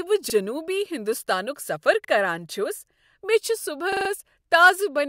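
Three times in this speech, new audio failed to reach the output in time and the device replayed its last block, a repeated buffer. The repeated piece is about 43 ms long, which fits a 2048-sample buffer. At 0.30 to 0.34 s, just before "ہنٛدستانک سفر کران چھس", and at 2.05 to 2.09 s, between "ہنٛدستانک سفر" and "کران چھس", one extra play gives a brief hard-edged stutter. From 3.93 to 4.10 s the block sounds four extra times, a longer stuttering judder.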